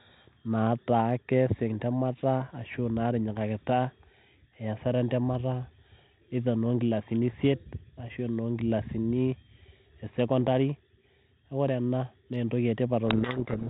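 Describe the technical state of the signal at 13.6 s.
At 13.6 s the signal is inside a codec payload misread running from 13.08 s to 13.70 s, the end of the clip. The decoder is taking the G.726 code words with their bit order reversed relative to how they were packed, so each 4-bit difference value at this 32 kbit/s rate is reconstructed wrongly and the adaptive predictor drifts. The speech is buried under harsh, grinding distortion for the whole span.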